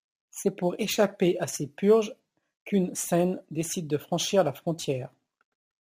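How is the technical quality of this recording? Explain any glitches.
The speech carries a gritty, inharmonic fizz for its whole length, riding on louder and brighter sounds and sitting roughly 25 dB below the voice. This is crude rate conversion: samples were repeated rather than filtered, which fits a 44.1 kHz to 48 kHz change, and the repetition pattern creates shifted, inharmonic copies of the speech.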